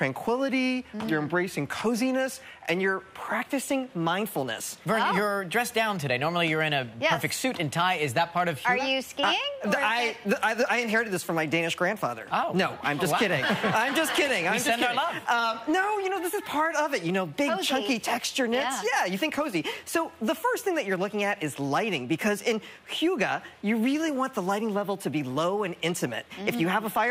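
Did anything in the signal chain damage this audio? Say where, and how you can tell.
Yes. From 3.35 s to the end, the sound runs about 1.09 times too fast and sits roughly 1.5 semitones sharp. This is a wrong sample rate fault at the playback or converter stage: the samples are clocked out faster than they were captured, with no resampling, which fits 44.1 kHz material played at 48 kHz. Speed and pitch shift by the same ratio at once. A pitch shifter or time-stretch would change only one of them.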